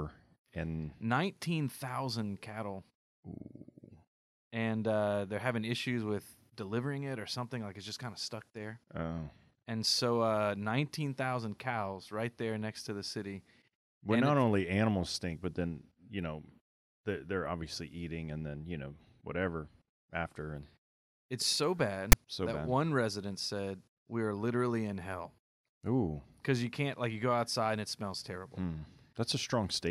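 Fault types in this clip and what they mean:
file tags played as audio: the player read a block of text tags as if it were samples, producing a brief, hard-edged rasp of static offset to one side at 22.12 s.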